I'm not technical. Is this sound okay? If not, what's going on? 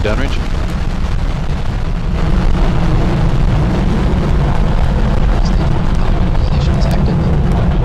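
No. From about 3.86 s to the end, the sound suddenly runs a little fast and higher, about 1.09 times its normal speed and roughly one and a half semitones sharp. That is a wrong sample rate: the audio is being played back at a faster rate than it was recorded at, with no conversion, so speed and pitch rise together. The amount fits audio recorded at 44.1 kHz but played as if it were 48 kHz.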